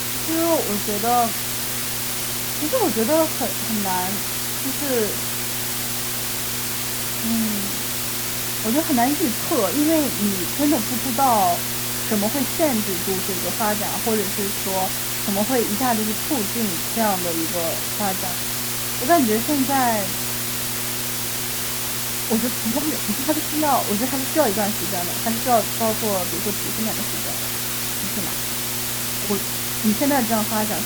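From start to finish a mains hum sits under the speech: a steady 60 Hz tone with low harmonics, about 15 dB below the speech level. It comes from power-line interference, such as a ground loop or a nearby transformer, leaking into the signal path.

Also present throughout is low bit depth with dither. Quantisation error has been turned into a constant, even white hiss, roughly as loud as the speech itself, which fits a signal reduced to about 3 bits with dither applied before rounding.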